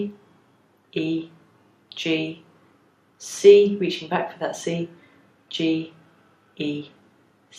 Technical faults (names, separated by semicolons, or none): none